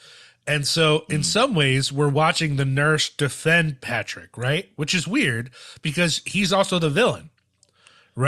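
No technical faults can be heard anywhere in the speech recording.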